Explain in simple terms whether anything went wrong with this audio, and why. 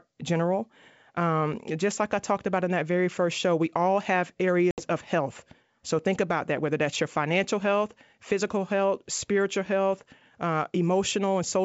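At 4.71 s the speech cuts to a hard-edged silence, then returns about 70 ms later sounding briefly rough until about 4.85 s. This is packet loss on an ADPCM call: several packets, about 70 ms of sound, never arrived, and the receiving decoder lost its running estimate until it caught up.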